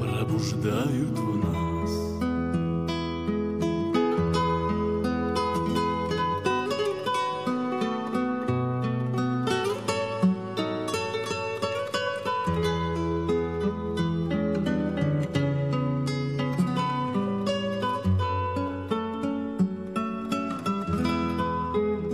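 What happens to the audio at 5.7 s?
Nothing goes wrong at 5.7 s: the audio plays through that moment intact, with no dropout, click or other fault.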